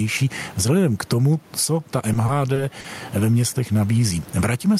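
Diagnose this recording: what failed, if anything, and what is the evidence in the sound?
Gain pumping runs through the whole speech clip: the room noise sits about 34 dB under the talker, and the level swings around 15 dB. Likely the input gain is cranked too high and a fast limiter keeps clamping it.

Between 2.13 and 2.86 s there's a stutter of repeated stalls, four brief hold-ups adding up to 90 ms, the longest 40 ms. That's the network side: packets arrived late, the jitter buffer ran dry, and the receiver stretched the last sound to cover each wait. Nothing's lost, it just drags.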